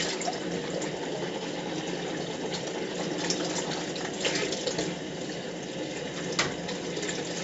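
Throughout, the audio has passed through 4-bit ADPCM compression at 64 kbps, which fits a 16 kHz sample rate. Coarse 4-bit prediction steps leave heavy gritty hiss riding every loud sound and roughen sharp attacks, while nothing remains above 7.7 kHz, dulling the top end.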